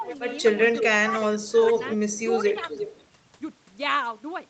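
At 0.00 to 0.04 s the echo canceller likely confused near-end speech with loudspeaker echo during double talk, so the speech is suppressed in double talk, dipping by about 10 dB for a brief moment. From 0.03 to 0.16 s an echo leak, likely from residual loudspeaker pickup passing the canceller, returns a faint copy about 15 dB down, delayed 346 ms. The leak returns from 0.73 to 3.06 s, stronger at about 10 dB below the speech and delayed 350 ms, and sounds like a trailing second voice. Inside that stretch, from 1.03 to 1.62 s, the canceller likely clamps both sides again, so the speech drops by up to about 15 dB in pieces totalling around 200 ms.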